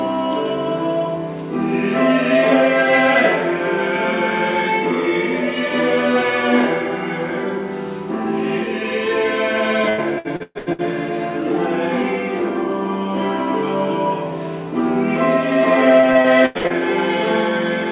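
The audio has repeated packet loss (robotic sound) from 9.89 to 10.81 s and from 16.00 to 16.73 s. Each stretch has six gaps, filled by continuing the last sound. Gaps run up to 122 ms and 89 ms. The result is choppy, with pieces missing. The call path cuts everything above 4 kHz.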